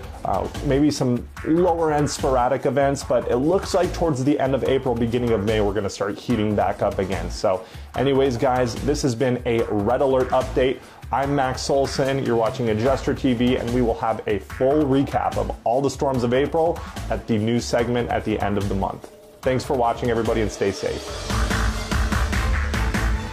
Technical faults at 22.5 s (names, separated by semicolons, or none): none